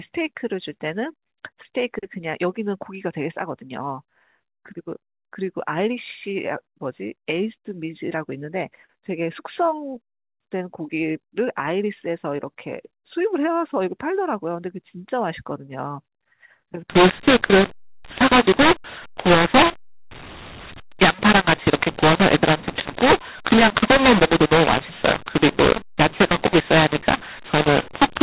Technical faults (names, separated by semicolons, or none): mu-law and A-law mixed up